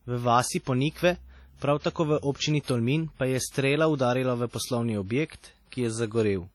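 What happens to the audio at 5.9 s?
At 5.9 s, as across the whole speech clip, the sound rings and washes, with hiss that breathes with the signal and nothing above 19.5 kHz. Likely WMA compression, heavy, fitting about 32 kbps: long transform blocks smear quantisation noise. Unlike steady background noise, this hiss tracks the speech.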